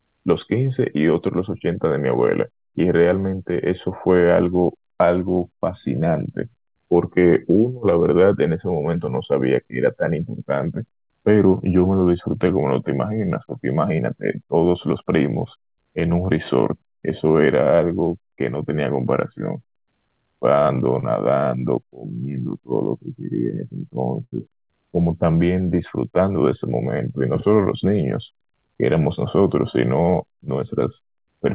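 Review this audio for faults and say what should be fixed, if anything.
Short concealed packet loss occurs at 1.58 s and 21.00 s. Each time about 20 ms of speech arrived too late, and the decoder extended the preceding sound to cover the hole, leaving a brief smear or wobble. Increasing jitter-buffer depth or adding forward error correction would prevent this.

A burst of packet loss runs from 24.24 to 24.34 s. Roughly 80 ms went missing, and the receiver held the last sound and faded it out before resuming further along. That produced a short buzz or hiss, and the speech in between is gone. Redundant encoding or a more stable network route would prevent this.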